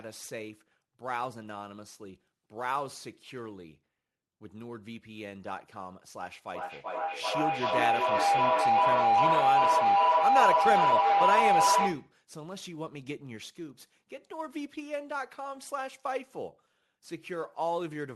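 From 6.54 to 12.15 s there's a feedback howl: two devices looping mic to speaker build a tone near 700 Hz, with the loop repeating about every 0.4 s, peaking about 9 dB above the speech.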